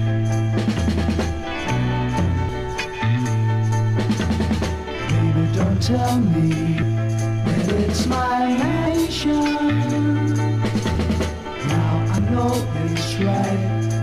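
Compressed frames are skipped at 2.48, 6.82, 8.86, 10.95 and 12.18 s. Missing or rejected frames make the audio jump ahead by roughly 0.3, 0.3, 0.7, 0.07 and 0.15 s. Overlapping frames smear each join into a soft blip, unlike a dropout's silent gap or hard click.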